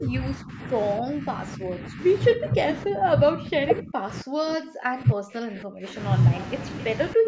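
An echo canceller facing both ends talking at once most likely couldn't tell the near talker from loudspeaker echo, so it pulled the speech down. This speech suppressed in double talk comes and goes: a dip of about 15 dB from 0.0 to 0.6 s, shallower dips at 1.0 to 1.41 s, 1.57 to 2.01 s and 2.35 to 2.59 s, then near-silencing of around 40 dB across 2.84 to 5.97 s and again at 7.14 to 7.27 s.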